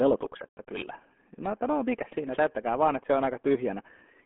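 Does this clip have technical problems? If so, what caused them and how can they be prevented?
Yes. From start to finish the speech sounds muffled and gargly, with a watery, smeared texture on every syllable and no brightness at all. Nothing is heard above about 3.7 kHz, and the low end is thin below roughly 250 Hz. This is the RealAudio 14.4 codec at work: the heavy artefacts point to a speech codec squeezing the sound into roughly 8 kbit/s for dial-up delivery. It keeps only a narrow telephone-like band and rebuilds the voice coarsely from a crude model. To prevent it, encode with a modern wideband codec at an adequate bitrate.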